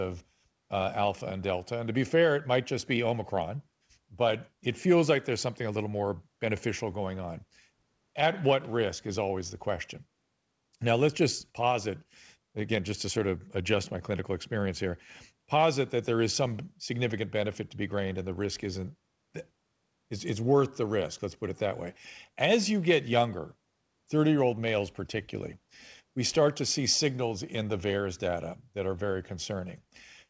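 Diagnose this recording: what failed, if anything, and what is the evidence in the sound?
Nothing failed: the speech comes through a wideband call path with no content above 8 kHz, which fits a G.722 codec, and the signal shows no defect anywhere.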